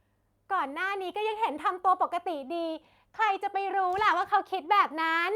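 No technical faults can be heard in this speech recording.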